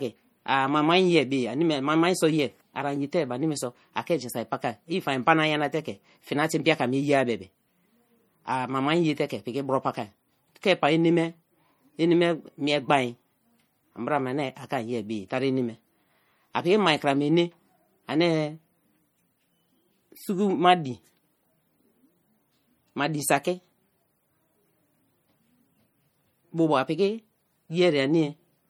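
Throughout the clip, the speech has a plainly audible watery, swirling quality, with metallic chirps on s sounds and softened, smeared consonant attacks. This is likely MP3 compression, which fits a low bitrate around 48 kbps: weak frequency lines are dropped and return from frame to frame, so the texture flickers. Unlike simple low-pass filtering or band-limiting, the treble is not cut off early, since content reaches about 21 kHz. The damage is instability within the band.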